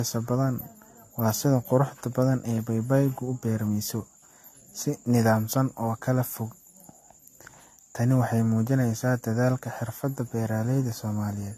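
Repeated lossy encoding, likely around four passes through a 64 kbit/s AAC-type codec, causes generation loss throughout: swirly, hollow, smeared speech with blurred attacks and nothing above 14 kHz.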